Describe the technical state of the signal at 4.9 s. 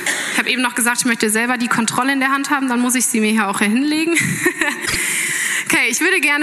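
Around 4.9 s you've got frames out of order, spanning roughly 4.86 to 4.96 s. Two neighbouring single-frame chunks, each about 26.1 ms, got swapped before decoding, so that tiny stretch plays with its halves exchanged. You hear a quick garbled flutter. Nothing's actually missing, and the timing carries on intact afterwards.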